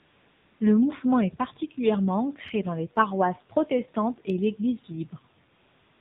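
From 0 to 0.6 s the clip opens on AMR comfort noise. The sending phone treated this stretch as silence and transmitted no speech frames, so the receiver generated a stand-in background from a coarse description of its level and spectral shape. The result is a smooth, even hiss with no real room detail, and it switches off abruptly once speech frames resume.

The AMR narrowband mobile codec is at work for the whole clip. Sampling at 8 kHz removes everything above 4 kHz, which gives the speech a boxed-in telephone quality. The low bit allocation, consistent with the 7.4 kbps mode, means the vocal-tract model is driven by only a sparse pulse excitation in each 5 ms subframe. The damage is plainly audible: a buzzy, synthetic edge on voiced sounds, with sibilants dulled.

From 5.52 s to the end, at about 6.0 s, AMR comfort noise appears again. Speech frames stop, and the same flat synthetic noise replaces the genuine background.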